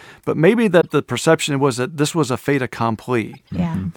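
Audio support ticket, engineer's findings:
Corrupt frame decoded, 0.80 to 0.92 s (after "but maybe", before "the perception was that"), loud glitch, error peaking about -5 dBFS, plus 3.33 to 3.51 s, faint. Decoder played bit-flipped frames, so energy lands at the wrong frequencies. Unlike a dropout, the damaged frames are played rather than muted.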